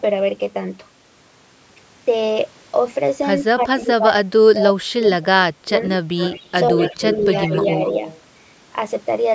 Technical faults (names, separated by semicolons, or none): speech suppressed in double talk; echo leak